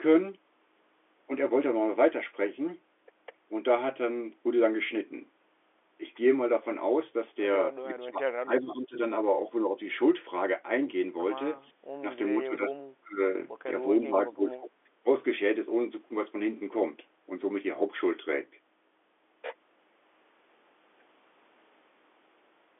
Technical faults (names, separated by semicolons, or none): speech suppressed in double talk